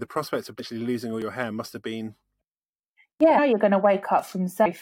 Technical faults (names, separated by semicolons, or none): damaged data in a compressed stream; audio missing between chunks